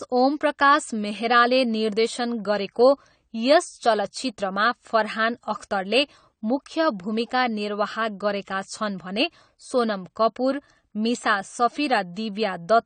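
From start to finish the speech sounds dull and smeared, with a watery, warbling edge on sustained vowels and a fizzy texture on sibilants. Nothing is present above 9 kHz. The likely cause is AAC compression, with the encoder quantising too coarsely, as fits a low bitrate of around 32 kbps. On a spectrogram there is a hard ceiling at 9 kHz, with patchy holes and blotchy, noise-like fill in the upper bands beneath it.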